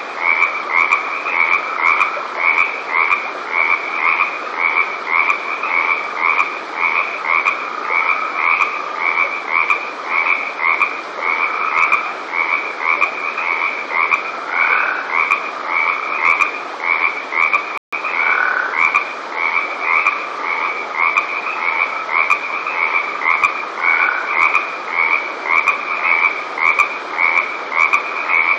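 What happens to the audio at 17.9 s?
A rebuffering stall: the player ran out of downloaded audio from 17.78 to 17.93 s, so the sound drops to silence for 150 ms, then resumes exactly where it stopped.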